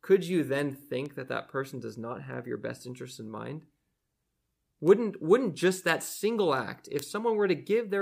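Sharp ticks run at a steady rate through the speech from 0.21 s to 7.84 s, arriving about every 0.4 s, around twenty in all. These are word clock ticks: the receiving device reads the digital link on its own clock rather than locking to the sender's. With the two clocks apart by something like 50 parts per million, they slip past each other at regular intervals, and each slip drops or repeats a single sample, producing a tick.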